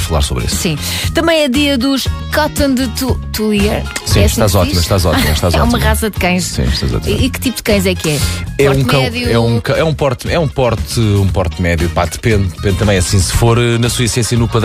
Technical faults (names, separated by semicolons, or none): none